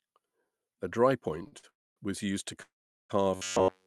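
Between 1.43 and 1.65 s, just before "was used to", the sound is briefly held and stretched three times, for about 20, 48 and 49 ms. These are short stalls from late packets: the jitter buffer ran empty and the last sound was extended until each packet arrived.

At 1.69 to 1.98 s, and again at 2.62 to 3.11 s right after "was used to", the audio freezes into a fading buzz and then mostly silence, inserting pauses of about 0.27 s and 0.47 s. This call audio freeze likely comes from packets held up in transit, with playback resuming where it stopped.

From 3.35 s to the end, the sound turns into a rigid, metallic buzz at 93.8 Hz. This robotic sound from repeated short buffers points to roughly 11 ms of audio being looped while the real signal is skipped.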